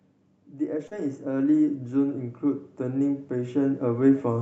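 Automatic gain rising from 0.51 to 2.25 s lifts speech and background together by about 6 dB, as the gain control judged the input too quiet. Short concealed packet loss from 0.87 to 0.93 s: 40 ms went missing, and the decoder filled about 37 ms by extending the preceding sound, leaving a brief smear before blending back. Automatic gain rising returns from 2.78 s to the end, with the level swelling gradually again.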